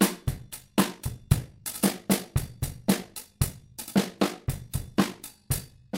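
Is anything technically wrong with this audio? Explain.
Yes. Overlap-add ripple runs from 0.36 s to the end. The audio was split into windowed frames and rejoined with overlaps that don't sum to constant gain, so the level swings by about 6 dB roughly 50 times a second, adding a rough, buzzy modulation.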